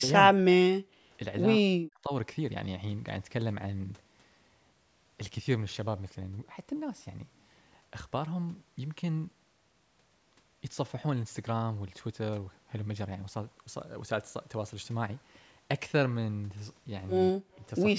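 Speech with level dropouts in four places: 0.00–0.12 s, 0.31–0.89 s, 1.59–2.12 s and 17.33–17.61 s. The first drops by about 10 dB, and the other three by as much as about 40 dB. The likely cause is speech suppressed in double talk: while far-end audio played on the loudspeaker, the echo canceller could not tell this talker from its own echo and turned both down. The audio's bandwidth ends at 8 kHz, consistent with call microphone processing.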